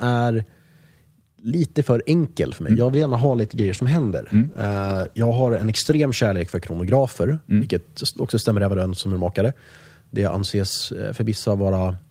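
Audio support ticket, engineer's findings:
Rough, muffled speech with the highs cut, 2.87–7.55 s, worst for 3.1 s. Call bitrate drop: encoder coding coarsely, consistent with a fall from 40 to 13 kbps.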